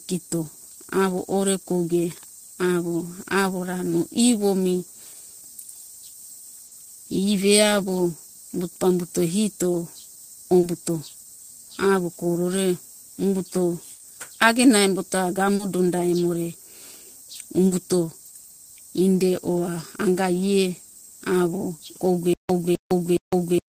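At 6.67, 10.59, 13.95 (between "avo koro re umbuto" and "agena embo ta"), 15.55 (between "agena embo ta" and "donda emo re"), 17.67 and 21.75 s, short concealed packet loss occurs: 40 ms of speech never arrived and was synthesised from what came before. Each is a brief smear or wobble, visible as a smoothed, harmonics-blurred patch in the spectrogram.

From 22.33 s to the end, a stutter with silent gaps takes over, likely from a stalled stream retrying. A 0.26 s fragment repeats every 0.42 s, separated by 0.16 s of digital silence. The waveform shows identical blocks alternating with flat silent stretches.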